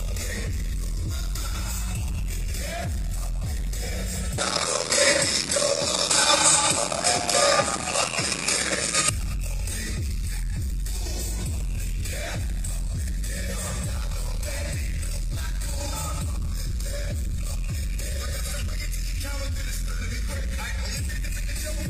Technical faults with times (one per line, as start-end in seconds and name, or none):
4.38-9.09 input switched to a poorer device